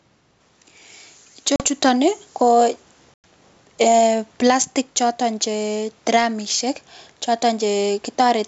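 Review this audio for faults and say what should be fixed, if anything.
Gain pumping runs through the whole recording. The room noise sits about 45 dB below the speech. The level swings by around 5 dB, which squeezes loud and quiet passages together. The likely cause is microphone gain set far too high, with a fast limiter or compressor clamping each peak and then releasing in the gaps. Lower the input gain and slow or relax the limiter so it stops riding the signal.

Packet loss on an ADPCM call produces two hard-edged dropouts over the G.722 wideband coding: a 40 ms hole between 1.56 and 1.65 s, and a 100 ms hole between 3.14 and 3.24 s. These lengths point to roughly two and five lost packets. Silence fills each gap. When the sound returns, the decoder's adaptive predictor and step size no longer match the sender's, so the restart comes back slightly distorted before settling. Reduce network loss with jitter buffering or redundancy, and add packet-loss concealment that resets the decoder state cleanly.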